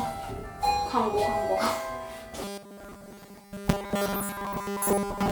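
From 2.43 s to the end at 5.31 s, the sound turns robotic from repeated short buffers: a rigid, metallic buzz at 200 Hz. That's likely from audio arriving too seldom, so a 5 ms slice gets replayed and most of the real signal is skipped.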